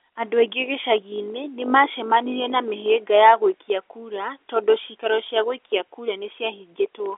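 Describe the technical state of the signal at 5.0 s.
At 5.0 s the audio is intact, with only the expected narrow telephone band of G.711 coding and nothing above about 3.6 kHz.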